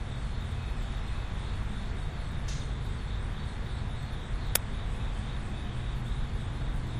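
At 4.55 s, file tags played as audio: the player read a block of embedded cover-picture data as if it were samples. Because that picture data is compressed, it comes out as a hard-edged click of very loud white noise, a brief static burst cutting through the sound.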